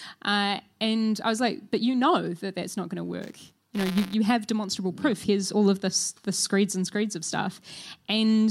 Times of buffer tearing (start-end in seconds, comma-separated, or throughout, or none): 3.21-4.14